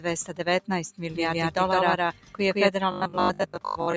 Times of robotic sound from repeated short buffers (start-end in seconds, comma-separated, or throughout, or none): 2.91-3.96